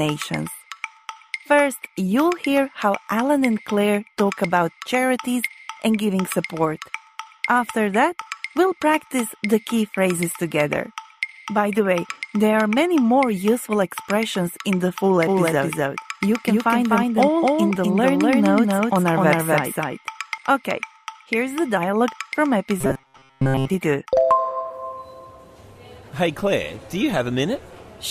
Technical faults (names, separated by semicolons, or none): doubled audio track; robotic sound from repeated short buffers